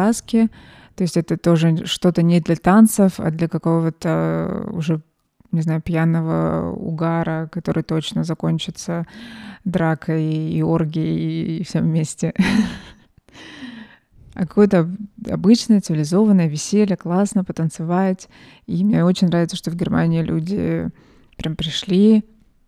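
No technical faults are audible anywhere in this speech recording.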